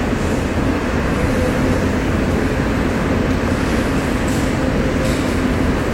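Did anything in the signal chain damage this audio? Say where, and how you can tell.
Yes: a call bitrate drop at the codec stage. From 0.38 to 1.87 s the sound goes rough and watery and the top end is cut off for about 1.4 s, which fits the encoder being throttled from around 128 kbps to roughly 21 kbps, then recovering.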